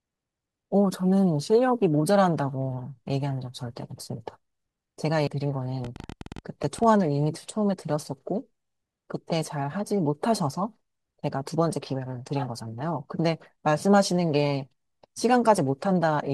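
At 5.27 s, damaged data in the compressed stream makes the decoder lose sync, giving a chirp, squawk, click or short hole; a spectrogram shows a broadband smear.

From 5.85 to 6.84 s, a train of clicks, around fifteen, ticks irregularly at 14.2 per second, peaking a few decibels above the speech. The clicks are likely from interference and appear as thin vertical spikes on the waveform.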